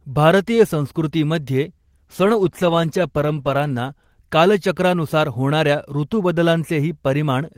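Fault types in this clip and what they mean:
call bitrate drop: The network's bandwidth estimate sagged, so the encoder got squeezed onto far fewer bits and had to code the speech much more coarsely, trimming off the top end as well. Here it kicks in at about 1.67 s and the voice goes rough and muffled, bottoming out for roughly 1.9 s, which sounds like a fall from around 32 kbps to about 14 kbps, before clarity comes back near 4.63 s.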